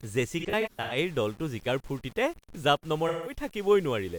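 The speech was likely reduced to very few bits and rounded without dither, roughly 7 bits judging by the texture. The rounding error tracks the signal at about 25 dB below it, so quiet stretches and decays turn gritty and grainy throughout.

From 0.39 to 0.97 s, AAC frame loss with concealment sets in. Missing frames scattered across about half a second, totalling about 0.3 s, with no gap much longer than a tenth of a second, are patched from earlier spectra, leaving a smeared, phasey, noisy stretch. At 3.08 to 3.35 s, about 0.17 s of lost frames produces another shorter smeared patch.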